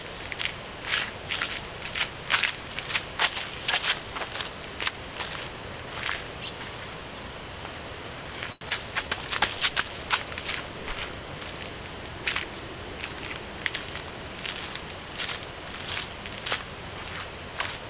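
Block size mismatch (truncated) runs through the whole clip. One stage writes blocks longer than the next reads, so each block's tail is discarded, leaving a 43.1 Hz buzz, which fits a 1024-sample read at 44.1 kHz, and audio running 1.12 times fast at roughly unchanged pitch.

A short stall from a late packet occurs from 8.52 to 8.63 s. A packet arrived late and the jitter buffer emptied, so the receiver held the last sound for 91 ms and then resumed where it left off. Nothing is lost, but the sound drags, and playback now sits 91 ms later.

A short concealed packet loss follows from 8.69 to 8.72 s. 40 ms of audio never arrived in time; the receiver bridged it with 12 ms of extended sound before blending back, and playback jumps ahead by roughly 30 ms. It is heard as a brief smear or wobble, within the G.711 call band that stops at 4 kHz.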